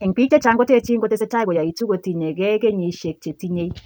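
Speech whose opening, 0 to 1.84 s, is a time-stretched section running about 1.62 times fast, rushed while pitch stays put, unlike a sped-up playback that raises pitch; likely software fitting it to a length.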